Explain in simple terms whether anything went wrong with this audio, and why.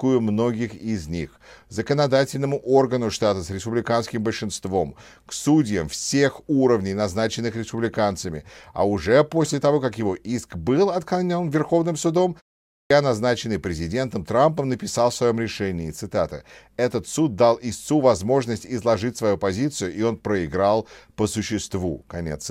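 At 12.63 s there is a clipped start after a pause. During a short silence of about 0.3 s, the playback device dozed off and took time to wake. About 0.27 s of speech was swallowed, so "назначенный президентом" starts abruptly, missing its first sounds.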